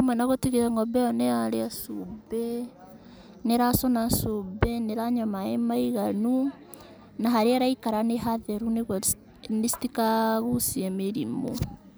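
Nothing goes wrong anywhere in this recording of speech; there are no technical faults to point to at any moment.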